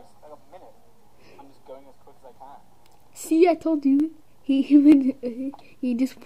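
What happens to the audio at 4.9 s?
At 4.92 s a single sharp click sounds, likely from dropped samples: a fraction of a millisecond of the stream is missing, so the waveform jumps abruptly to a later value. On a spectrogram it shows as one thin vertical line spanning the frequencies.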